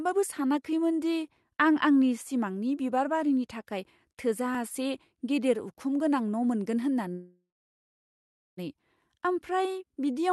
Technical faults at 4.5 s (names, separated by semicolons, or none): audio missing between chunks